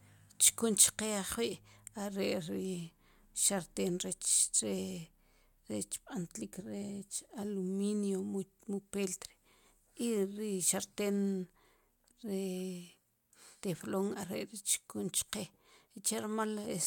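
Speech, with one block of digital silence at 4.48 s. The signal drops straight to silence for about 5.3 ms and returns with no fade. Both edges land so close together that they fuse into a single tick or dip. The length fits a 256-sample output buffer left unfilled in time.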